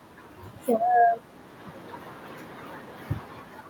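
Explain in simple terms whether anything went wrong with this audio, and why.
Nothing went wrong with this recording. The noise of the room stays in the background, and the voice gets quieter or louder around the one-second mark and again near three seconds, which is just the talker shifting position relative to the microphone.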